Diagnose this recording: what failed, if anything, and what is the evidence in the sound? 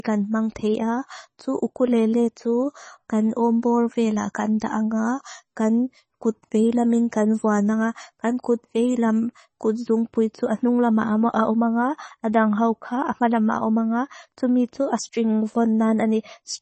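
Codec stage, likely heavy MP3 compression: throughout, nothing above 8.3 kHz and swirly, watery s sounds as starved frequency lines flicker, fitting about 24 kbps.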